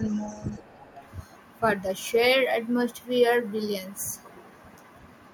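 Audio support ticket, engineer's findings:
Other side's voice leaking through, 0.08–0.62 s: faint second voice under the talker, roughly 25 dB down. The cause is likely uncancelled loudspeaker echo. The echo canceller did not remove the far end picked up by the mic.

Same leak, 0.94–1.07 s: a short scrap at a similar level, about 25 dB below the speech. This is likely the same residual echo path leaking past the canceller again.

Speech suppressed in double talk, 0.58–0.9 s: the talker's level drops by as much as about 25 dB, for roughly 300 ms, starting as the first leak ends. The cause is likely a canceller confused by both sides talking at once, so it turned down its own talker along with the echo.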